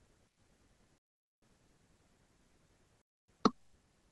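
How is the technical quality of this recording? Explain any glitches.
The speech is cut twice by a digital wireless dropout, from 0.98 to 1.42 s (about 0.44 s) and from 3.02 to 3.28 s (about 0.27 s). Each time the receiver lost too much of the digital link's data and muted itself with a very fast fade, leaving a clean hole of near silence. Unlike an analogue radio dropout, there is no hiss, crackle or noise burst before or after either gap.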